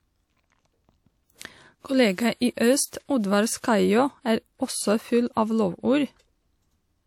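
At 2.35 s a transform codec spread its quantisation noise across a whole block ending at a sharp speech attack, so noise meant for the loud onset filled the quiet gap before it. The result is pre-echo: about 58 ms of short hiss up to 2.41 s, with the attack itself sounding softened and smeared.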